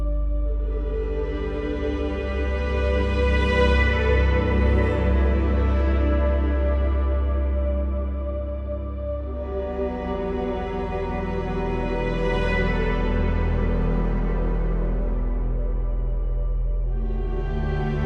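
From start to finish, the sound is dull and smeared at the top. A gurgling, granular roughness sits under everything. High detail flickers in and out instead of holding steady. This is likely MP2 compression at a low bitrate, something near 80 kbps. Too few bits reach the upper sub-bands. Whole bands switch off, and the rest are coarsely quantised. The damage is plainly audible throughout, much like weak digital radio.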